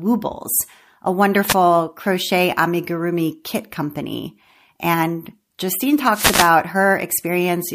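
At 1.46 to 1.55 s, then 6.10 to 6.53 s, the speech is hit by wireless microphone noise. The FM radio link fades as reflections cancel. Receiver noise surges as a brief static swish. The second hit is longer.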